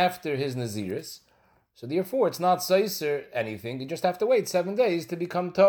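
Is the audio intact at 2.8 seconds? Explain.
Yes, the audio is intact at 2.8 seconds, with no audible fault at that moment.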